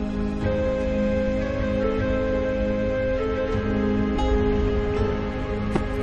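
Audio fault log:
4.15 s, damaged data in a compressed stream: a quick blip where the decoder trips over corrupted bytes, loses sync and hunts for the next clean frame header.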